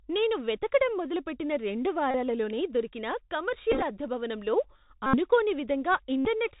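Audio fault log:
throughout: Bluetooth CVSD headset codec. The speech is squeezed into narrowband, with nothing above 4 kHz, so it sounds boxed-in and muffled. CVSD just sends one up-or-down bit per sample at 64 kHz with an adaptive step, and here the damage is plainly audible. There's a grainy hiss sitting under the voice, s sounds come out scratchy, and louder bright bits distort where the step size can't keep up.
2.11–2.15 s: Bluetooth headset packet repeated, right after "నేను వెతకడం మొదలుపెట్టిన రెండు". About 34 ms of packets went missing and the chip replayed the last one, giving a short buzz near 267 Hz from the 3.75 ms repeat cycle.
3.72–3.82 s: packet repeated, just before "అద్దె భవనంలో". Here it's scattered rather than one solid run: roughly 60 ms lost across 105 ms, in short bursts of around 15 ms at most, so it sounds like choppy little buzzy ticks.
5.06–5.17 s: packet repeated, after "అద్దె భవనంలో". 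About 71 ms of repeats, heard as a steady buzz near 267 Hz.
6.19–6.27 s: packet repeated, about 68 ms, the same kind of buzzy stretch until clean packets return.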